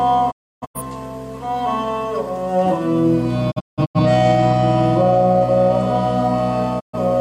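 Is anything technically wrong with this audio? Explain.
Yes: three digital broadcast dropouts, at 0.3–0.8 s, 3.5–4.0 s and 6.79–6.95 s. The receiver stopped getting valid frames and muted, so the sound fades out over about 20 ms and leaves gaps. The first two are broken into several short holes, and the content is lost rather than delayed.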